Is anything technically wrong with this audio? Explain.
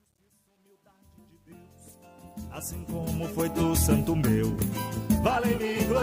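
Yes. Truncation distortion on a fade runs from 0 to 3.62 s and is worst before 2.22 s. The fade-in lacks dither and fits a 10-bit stage. Its quiet start turns gritty.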